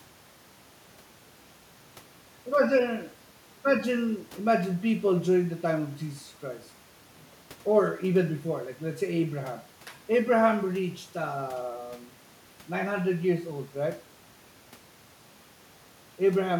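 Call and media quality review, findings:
No faults found in this speech recording. Nothing audible calls for a ticket.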